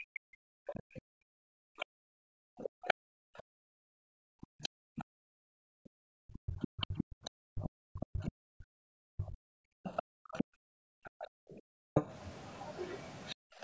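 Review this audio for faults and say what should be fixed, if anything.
Speech suppressed in double talk, 0.0 to 0.33 s: the echo canceller likely mistook simultaneous talk on both sides for echo and pulled the talker down with it, so the opening sound sinks by roughly 40 dB. Prevent it by tuning the double-talk detector to hold the near-end path open when both sides are active.

Background gated by the echo canceller, 0.61 to 11.94 s and again 13.35 to 13.63 s: while the loudspeaker played, the canceller clamped the microphone, so room sound dips by up to about 40 dB and returns, gating roughly ten seconds overall. Prevent it by easing suppression depth and adding comfort noise during far-end playback.

Other side's voice leaking through at 0.67 to 0.73 s, 1.8 to 2.94 s, 4.63 to 5.03 s and 6.62 to 13.35 s: the canceller left residual loudspeaker signal in the microphone, likely from incomplete echo modelling. 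It sits roughly 35, 20, 35 and 30 dB below the talker, most audible around 1.8 s. Prevent it by improving echo-path adaptation and residual echo suppression.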